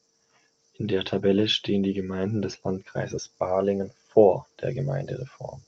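Clock drift between sender and receiver runs through the whole clip. The sender's clock is roughly 4 percent fast, so the jitter buffer keeps overfilling. Repeated timing corrections follow from 0.07 s to 5.65 s. The receiver trims short pieces to keep pace, leaving the speech at 104 percent speed with small, uneven hiccups. The call codec also cuts off the highs near 8 kHz.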